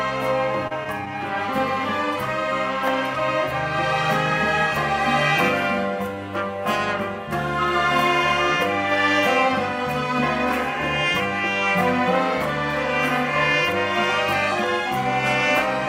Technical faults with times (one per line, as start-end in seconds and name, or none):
0.67-0.72 short concealed packet loss